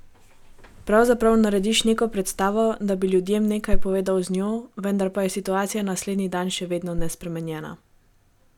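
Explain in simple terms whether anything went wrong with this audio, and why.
At 6.98 to 7.12 s there's a phantom power thump: a deep electrical bump from mic power switching, dying away quickly, unlike a breath pop or handling noise.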